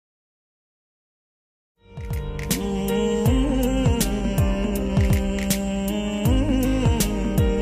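No technical fault can be heard in this audio. The level rises in a smooth fade-in that begins around 1.5 s and reaches full level by 2.65 s, with no step or click along the way.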